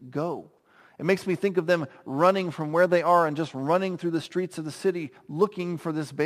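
Speech carries a gritty, inharmonic fizz throughout, sitting roughly 30 dB below the voice. It is crude rate conversion: samples dropped without filtering, which fits 48 kHz converted to 44.1 kHz.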